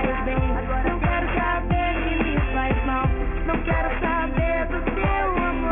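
Aliasing runs throughout. The sound points to a drop to a 6 kHz rate without filtering. Content above 3 kHz folds back as unrelated tones, about 10 dB below the signal.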